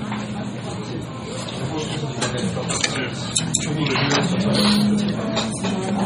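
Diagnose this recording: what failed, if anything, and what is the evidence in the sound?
At the codec stage, likely MP3 compression, consistent with about 32 kbps, starves the frames of bits: heavy watery swirling and smeared attacks throughout, with nothing above 15.3 kHz.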